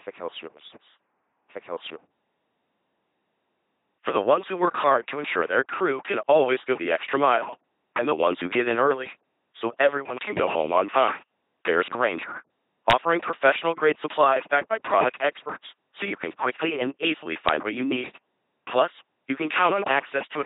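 From start to finish the speech has gone through an LPC-10 vocoder, and the damage is heavy. Every moment gets rebuilt as either a pulse train or noise feeding a small vocal-tract filter, so it comes out buzzy and robotic, with nothing above 3.9 kHz, which fits a 2.4 kbit/s stream.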